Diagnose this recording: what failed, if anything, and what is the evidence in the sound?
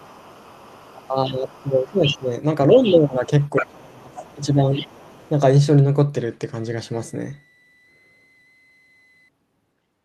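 Call processing, echo path: a second, fainter voice sits under the speech from 0.0 to 2.19 s, and again at 2.71–2.93, 3.44–3.67, 4.15–4.36 and 4.75–5.3 s. It ranges from roughly 25 dB down to about 10 dB below the main talker. This is the other side's voice leaking through, likely from loudspeaker sound the echo canceller left in the microphone signal. It is a separate talker rather than a delayed copy of the main one, so it is not a reflection or doubling artefact.

Call processing, double-talk handling: the main speech dips at 1.08–2.31, 2.73–3.24 and 3.6–4.89 s. The drops run from around 10 dB to roughly 25 dB at the deepest, and they coincide with the leaked voice. This is speech suppressed in double talk. With both sides active, the canceller could not separate near speech from echo and attenuated everything. Because the dips follow the other side's activity, this points to suppression rather than to network loss or an automatic gain control fault.

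Analogue wiring and power: from 6.54 to 9.29 s a faint high whistle near 2 kHz appears, roughly 40 dB below the signal. Its pitch wanders between about 1.9 and 2.04 kHz. This is a switching supply whistle. A switching regulator drops into a burst mode at audible rates, or beats with another supply, and the result couples into the audio. The drifting pitch separates it from a fixed mains hum or a steady clock spur.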